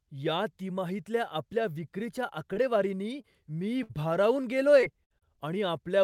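At 2.53 to 2.58 s and again at 3.22 to 3.25 s, short concealed packet loss leaves a 20 ms hole in the speech that the receiver patches by extending the preceding sound. Each is heard as a quick smear or wobble. A spectrogram shows a brief stretch of copied harmonics or flat noise.

From 3.83 to 3.91 s a burst of packet loss drops about 60 ms of speech. The decoder holds the last sound and fades it, then jumps ahead. The waveform shows a tapering, repetitive segment where the following material never appears.

Between 4.81 and 5.38 s, repeated packet loss (robotic sound) breaks the stretch with four gaps, the longest 58 ms, concealing about a fifth of it. The speech turns choppy, and the spectrogram shows harmonic bands repeatedly frozen and interrupted.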